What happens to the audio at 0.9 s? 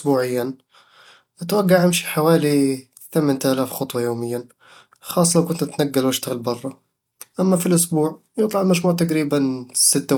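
Nothing goes wrong at 0.9 s: the speech runs through that moment intact, with no dropout, click or other fault.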